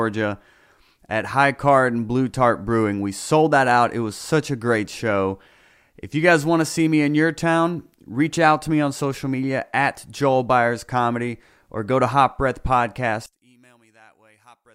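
At 13.26 s, lasting to the end, the speech drops by about 32 dB to a faint residue. The likely cause is one channel inverted, so the centred voice cancels when summed to mono; the waveform shrinks sharply and the spectrogram almost fades across all bands.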